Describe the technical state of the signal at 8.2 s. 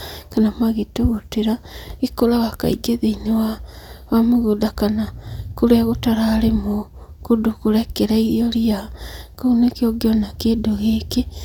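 At 8.2 s the speech signal is intact, with no audible technical fault at that moment.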